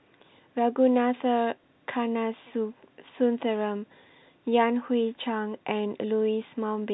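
No faults in the speech; it carries the narrow telephone band of G.711 coding, nothing above 4 kHz, as expected for that path.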